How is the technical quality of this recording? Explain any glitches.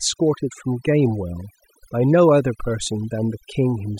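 The recording is marred by one problem running through the whole clip. Overdone noise removal: a noise reducer set too aggressively cuts frequency bands near its noise estimate, taking quiet speech detail too, leaving twinkling near-silence.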